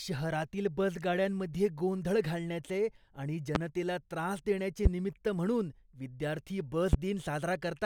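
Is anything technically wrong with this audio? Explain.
Yes. Three loud pops cut through the speech: at 3.55 to 3.58 s, after "बसगाड्यांमध्ये गोंधळ घालण्याचे आणि"; at 4.85 to 4.89 s, after "त्रास देण्याचे"; and at 6.93 to 6.96 s, after "देण्याचे निमित्त म्हणून विद्यार्थी". Each is a single sharp burst roughly 20 dB above the speech, likely from a voltage spike such as static or a switching glitch. Unlike a dropout, the speech carries on underneath each pop.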